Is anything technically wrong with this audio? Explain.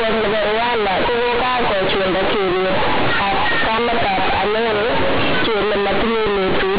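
Yes. Throughout the speech, the mu-law bytes, which point to G.711 telephone coding at 8 kHz, are played back as linear 8-bit samples instead of being expanded. That is companded audio read as linear. Each sign change jumps across half the output range, so quiet passages come out as loud as peaks. The result is harsh, buzzy distortion with heavy noise filling the pauses.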